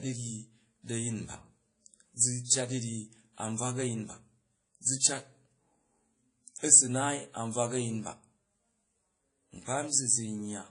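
From start to end, the speech carries plainly audible damage from what is likely WMA compression. Nothing reaches above about 10.1 kHz. The low bitrate, fitting roughly 32 kbps, smears quantisation noise across long blocks. The speech rings and washes, and a hiss breathes with each phrase.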